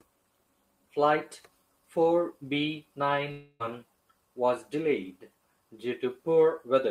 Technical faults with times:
3.31-3.62 long network dropout

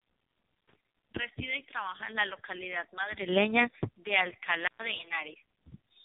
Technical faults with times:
0.00-6.05 AMR narrowband mobile codec

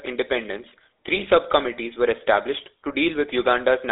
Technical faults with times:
0.00-3.91 GSM full-rate codec
1.13-1.29 GSM bit errors

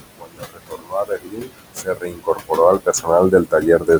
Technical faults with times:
0.00-3.99 noise suppressor artifacts
0.18-3.99 speech cut by the noise suppressor

